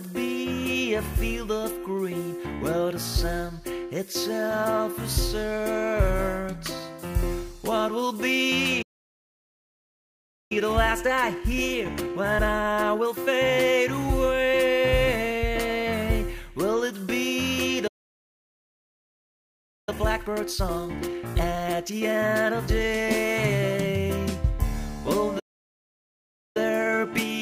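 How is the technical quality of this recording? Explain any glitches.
The recording is marred by three playback stalls, each followed by a time-compressed catch-up.

Playback stalls occur at 8.82 to 10.52 s (about 1.7 s), 17.87 to 19.89 s (2.0 s) and 25.39 to 26.57 s (about 1.2 s). The sound halts mid-flow and falls silent, most likely because the player starved for data or its thread blocked. Unlike a brief dropout, each gap lasts over a second before the sound resumes.

Time-compressed catch-up follows each stall: 10.52 to 13.52 s at 1.25 times speed, 19.89 to 22.89 s at 1.5 times, and 26.57 s to the end at 1.15 times. The player trims its backlog by cutting and cross-fading short slices, so the audio rushes. Unlike a simple speed-up, the pitch stays normal.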